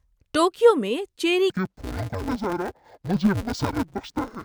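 From 1.50 s to the end, interleaved audio is read as planar: each 5.33 ms block of alternating left and right samples is split into halves and treated as two separate channels. With blocks this short, the speech turns dull and robotic, buzzing at about 188 Hz, with no clear octave drop.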